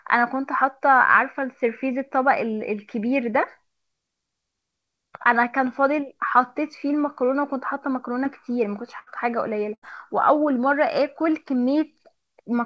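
At 8.24 to 8.27 s there is a short concealed packet loss. About 20 ms of audio arrived too late, so the receiver extended the preceding sound. It is heard as a brief smear.

Two bursts of packet loss follow, at 8.99 to 9.09 s and 9.75 to 9.84 s. Each loses about 80 ms. The gap is filled with a fading continuation of the last sound, and the audio resumes further on.

The call path, audible as a band limit with nothing above 8 kHz, is consistent with G.722.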